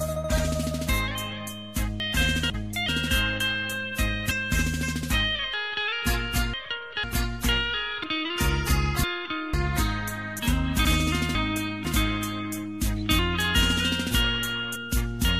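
The audio has chunks out of order at 2.0 to 2.88 s, 5.54 to 7.04 s, 8.04 to 9.54 s and 10.85 to 11.85 s. Half-second chunks play one or two places late. Each spot sounds jumbled. Compressed frames skipped cause jumps at 2.53 s, 4.30 s, 10.38 to 10.40 s, 13.54 s and 14.75 s. Each time the audio jumps ahead by whole 23.2 ms frames. That loses roughly a tenth to nearly half a second.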